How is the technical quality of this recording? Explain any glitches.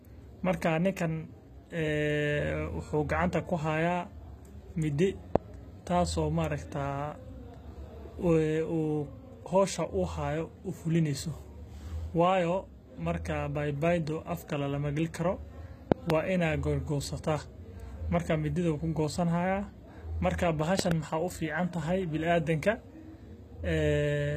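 The recording has plainly audible codec damage throughout and five loud pops at three moments.

HE-AAC compression, throughout: the treble is likely rebuilt by spectral band replication, copying lower bands upward under a coarse envelope, which fits a bitrate around 20 kbps. Sibilants in the speech sound gritty and metallic, and nothing reaches above 14.9 kHz.

Loud pops, at 5.36–5.38 s (one pop), 15.92–16.12 s (two) and 20.79–20.94 s (two): sharp bursts about 25, 25 and 20 dB above the speech, which continues underneath. They likely come from a sudden voltage step or pulse, such as a plug, switch or static discharge.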